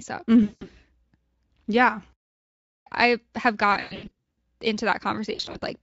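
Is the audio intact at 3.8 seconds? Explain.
No. From 3.73 to 4.38 s, just after "i have", the stream suffers VoIP packet loss concealed by the speech codec. About 420 ms of audio went missing in gaps spread over roughly 640 ms, the longest lasting 120 ms. For each gap, the decoder repeats its last pitch and spectral shape at falling gain. The sound smears into a buzzy tone or a coloured noise that fades, and because each frame builds on the previous one it stays weak or distorted for tens of milliseconds or more after the gaps end.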